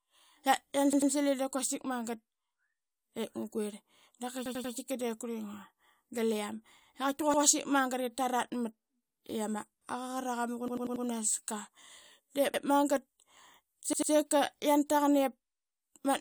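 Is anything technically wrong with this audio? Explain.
Yes. A repeated buffer stutters the speech at 0.93 to 1.12 s, 4.46 to 4.74 s, 7.34 to 7.43 s, 9.10 to 9.20 s, 10.68 to 11.05 s, 12.54 to 12.63 s and 13.93 to 14.12 s. Fresh audio arrived late, so the last 93 ms block replayed one to four extra times, with hard joins. The block length fits a 4096-sample buffer.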